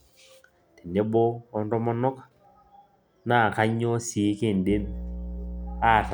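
Mains hum enters at 4.67 s and continues to the end of the speech: a steady low tone at 60 Hz, sitting about 10 dB below the signal. Power-line current is leaking into the audio path, most likely through a ground loop or a nearby transformer.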